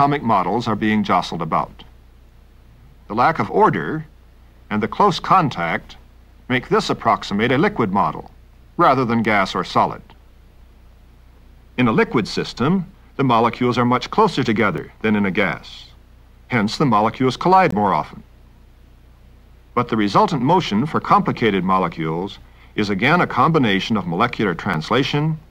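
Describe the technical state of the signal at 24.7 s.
At 24.74 s there is a sharp tick: a 5 ms block of digital silence, where the signal drops to zero and returns with no fade. Both edges are abrupt steps, but the hole is too short to hear as a gap, so the two clicks merge into a single tick. The cause is a block of samples replaced by zeros, most plausibly because the output buffer was not filled in time.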